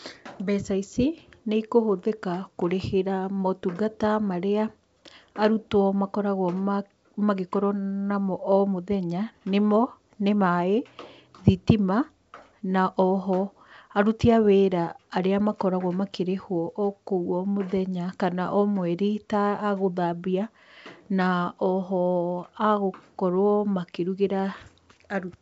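Nothing stood out on listening to this speech clip, which comes across as ordinary wideband telephone audio.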